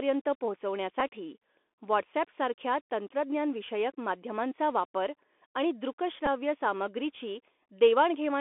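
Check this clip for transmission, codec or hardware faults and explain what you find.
Two faults are audible in this speech recording: a narrowband Bluetooth headset codec throughout, and two brief packet-repeat glitches.

Throughout, the speech is thin and boxy, with nothing above about 3.5 kHz and little below 250 Hz. Sibilants are scratchy, loud bright passages roughen, and a granular hiss sits under the speech. This is the Bluetooth CVSD headset codec, which sends one bit per sample, up or down, with an adaptive step size. Fast high-frequency movement outruns the step, which produces the distortion and grain. The coding is consistent with a 64 kbps link.

At 1.00 s and again at 6.26 s there is a short tick, a tiny roughness rather than a sustained buzz. Each is a Bluetooth headset packet repeated. Voice packets between headset and phone went missing, and the chip decoded the previous packet's bits a second time. 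About 7.5 ms of audio was replaced at each point, which fits two 3.75 ms packets. That is too brief to build into the steady 267 Hz buzz that a longer run of repeats would produce.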